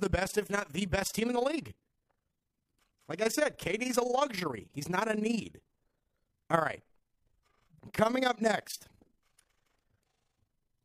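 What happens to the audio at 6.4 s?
At 6.4 s the speech has overlap-add ripple, present across the whole clip: badly matched frame overlaps swing the level about 11 dB around 30 times a second. The result is a rough flutter locked to the frame rate, unlike a smooth, musical tremolo.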